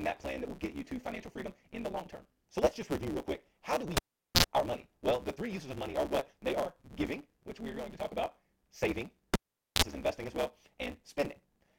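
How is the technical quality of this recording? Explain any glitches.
The recording has two clear problems: a constant block-size fault that buzzes and speeds up the speech, and two cable dropouts.

Block size mismatch (truncated), throughout: one stage writes longer blocks than the next reads, so each block's tail is discarded, which fits a 512-sample write block. The missing chunks leave a 138 Hz buzz under everything, and speech runs about 1.6 times fast with its timbre kept.

Cable pulled and plugged in, 3.97 to 4.44 s and 9.34 to 9.83 s: a live lead is removed and reinserted. Each event pops, drops to near silence, bursts with 50 Hz mains buzz (about 120 ms, then 84 ms) while only the tip touches, and pops again. The first falls between "quick how do we" and "our money".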